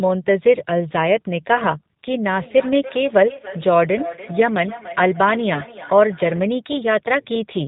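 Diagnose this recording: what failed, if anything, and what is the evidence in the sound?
Throughout, the speech is dull and band-limited with nothing above 4 kHz, and it has a slightly rough, synthetic texture with plainly audible coding damage. This is a codec-stage fault: G.729 coding, consistent with an 8 kbit/s stream, rebuilds every 10 ms frame from a vocal-tract filter, a pitch predictor and a handful of pulses.

At 3.37 to 3.40 s and again at 5.54 to 5.61 s, the speech briefly smears into a buzzy tone or coloured noise that fades, and sounds weak or distorted for a moment afterwards. This is VoIP packet loss concealed by the speech codec, a network-stage fault, and each gap fits a single lost 20 ms packet. The decoder extended its last pitch and filter with falling gain, and because each frame builds on the previous one, the voice stays affected for tens of milliseconds or more after packets return.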